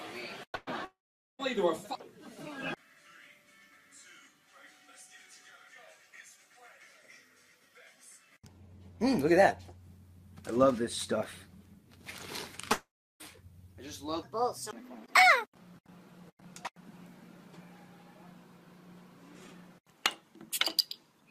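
From 0.55 to 0.70 s, the last sound is held and fades as a buzz or hiss for about 114 ms before the audio picks up again slightly further on. This is a burst of packet loss: about 120 ms of audio never arrived, and the receiver filled the gap.

At 0.85 to 1.42 s the same held, fading sound gives way to silence for about 440 ms. The audio then resumes past roughly 540 ms of lost material, likely a long network dropout. The same thing happens at 12.73 to 13.23 s, with about 330 ms of silence and about 480 ms missing.

From 14.23 to 15.55 s the audio turns high and hurried, running 1.4 times too fast and about five semitones sharp, likely a section at the wrong speed played against a mismatched clock so that speed and pitch rise together.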